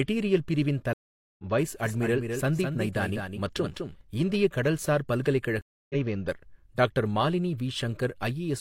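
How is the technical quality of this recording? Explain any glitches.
The speech is interrupted twice by dropouts that skip ahead, and for a stretch in between it is shadowed by a second, delayed copy of itself.

From 0.93 to 1.44 s and again from 5.61 to 5.95 s, just after "இந்திய கடல்சார்", the sound goes dead for 454 ms and then 284 ms. It comes back around a third and a fifth of a second further along, so some speech is skipped. This is a stream reconnect: the connection dropped, and the player rejoined the live stream with a fresh decoder.

From 1.85 to 4.01 s, ending just before "இந்திய கடல்சார்", every sound is repeated about a fifth of a second later by a dry, full-band copy about 5 dB quieter. The copy starts and stops abruptly. This is a doubled audio track, likely the same signal captured a second time through a slower path.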